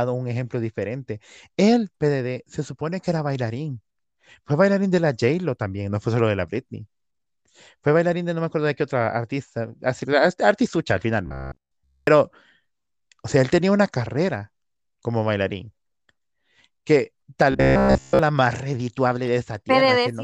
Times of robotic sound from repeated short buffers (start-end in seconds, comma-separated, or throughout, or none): 11.26-12.07, 17.52-18.19